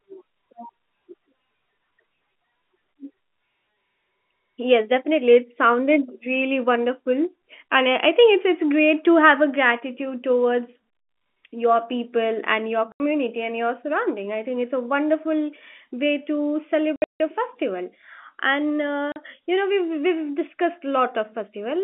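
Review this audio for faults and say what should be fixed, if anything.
Packet loss filled with silence cuts the speech at 12.92 to 13.0 s (80 ms), 16.96 to 17.2 s (220 ms of gaps scattered across 240 ms, longest run 160 ms), and 19.12 to 19.16 s (40 ms). Every hole is a multiple of 20 ms, which suggests 20 ms packets replaced by zeros. The waveform drops to silence with abrupt edges, and a spectrogram shows blank vertical bands. The G.711 telephone band, roughly 200 Hz to 3.4 kHz, shows through around the gaps. A jitter buffer with packet-loss concealment would prevent these holes.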